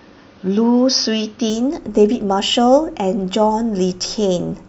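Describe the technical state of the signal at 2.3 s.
At 2.3 s the speech signal is intact, with no dropout, distortion, glitch or other audible fault.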